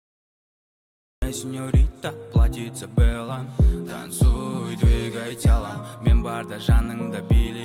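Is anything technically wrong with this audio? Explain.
Yes, there's a cut-off start. The first 1.22 s is digital silence, then at 1.22 s the audio just drops in mid-sound with no natural attack or fade. The recording or stream began late, so whatever was already going on gets chopped off abruptly.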